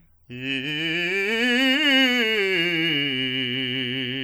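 From start to finish the music carries plainly audible damage, likely from MP3 compression at a low bitrate, around 64 kbps. Weak frequency lines flicker on and off between frames, giving a watery, swirly texture and smeared attacks.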